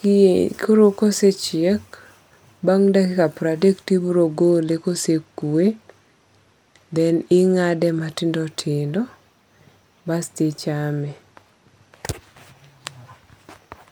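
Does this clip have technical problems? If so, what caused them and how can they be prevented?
Yes. From 4.26 to 8.17 s, just after "to ibiro", and again from 11.0 to 12.04 s, the speech loses its treble and picks up a gritty noise floor. That is a Bluetooth SBC bit pool drop. The link got congested and the encoder cut its bit pool, which fits a drop from 28 to 14 and roughly 108 kbps. The top sub-bands were starved and the rest coarsely quantised. Keeping the phone close, with fewer competing 2.4 GHz devices, prevents it.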